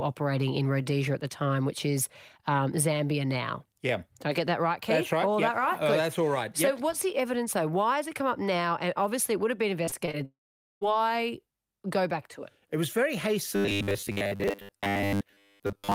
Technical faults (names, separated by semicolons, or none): repeated packet loss (robotic sound); long network dropout; robotic sound from repeated short buffers